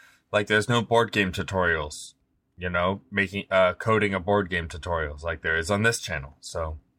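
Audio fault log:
No fault can be heard anywhere in this speech recording. There is nothing to log for this clip.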